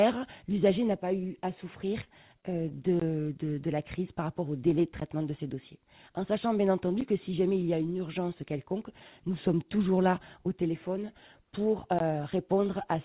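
At 2.04 to 2.09 s, short concealed packet loss: about 20 ms of audio never reached the decoder, so the receiver extrapolated the last sound across a 25 ms gap, leaving a brief smear. At 2.41 to 2.45 s, a short stall from a late packet emptied the jitter buffer. The receiver held the sound for 21 ms until the packet arrived, so nothing is lost but the sound lingers slightly too long.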